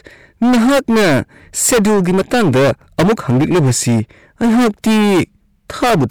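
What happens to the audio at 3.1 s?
At 3.1 s the speech is under hard clipping, which runs through the whole clip. The signal is driven about 19 dB past what the stage can pass, so nearly a third of samples are cut flat, and the squared-off peaks produce a harsh, buzzing distortion on every loud sound.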